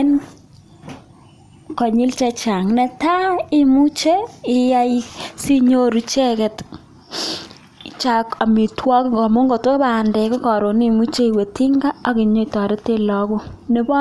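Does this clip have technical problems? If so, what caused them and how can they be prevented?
No, no technical faults audible.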